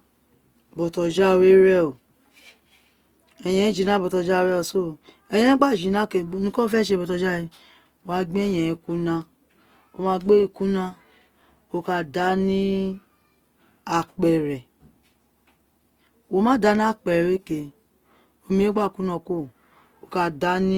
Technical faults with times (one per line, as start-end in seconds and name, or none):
0.00-20.77 Opus compression